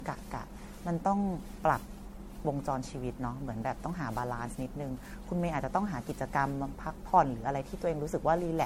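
From start to finish the speech carries generation loss, most likely from repeated MP3 encoding, with the character pointing to around seven passes at about 64 kbit/s. Each re-encode quantised the signal again on a shifted frame grid, so the errors accumulated rather than staying put. The result sounds swirly and hollow, with smeared consonant attacks and patchy gaps in the spectrum, and nothing is present above 16.5 kHz.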